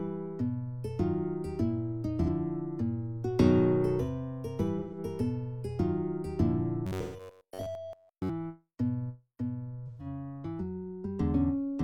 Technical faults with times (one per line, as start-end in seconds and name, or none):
2.23-2.29 AAC frame loss with concealment
4.79-4.98 AAC frame loss with concealment
6.87-8.29 robotic sound from repeated short buffers
7.01-7.20 AAC frame loss with concealment
9.86-10.06 AAC frame loss with concealment